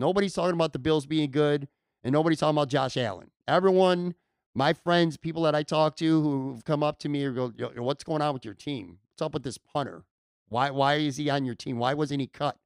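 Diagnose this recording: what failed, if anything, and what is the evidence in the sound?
Nothing failed; no stage shows any audible fault.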